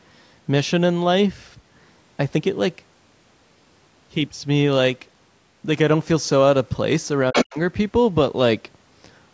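Right around 7.31 s the talker's level suddenly collapses. Across roughly the next quarter second, to 7.58 s, the sound dips hard and breaks up, with the deepest hole very deep, about 40 dB down, and about a fifth of a second of it chewed away in total. That's speech suppressed in double talk, and the likely cause is the call's echo canceller. With both ends talking at once, it couldn't tell the local voice apart from the loudspeaker echo, so it pulled everything down together.

Inside that same dip, from 7.33 to 7.44 s, a second voice pokes through. That's the other side's voice leaking through. The far end is likely playing on the device's loudspeaker and getting back into the mic, and the echo canceller didn't fully remove it. It's a short scrap, but it's not faint: it sits at about the same level as the talker. The microphone processing caps the audio at 8 kHz, so the leaked scrap is band-limited to that range like the rest of the call.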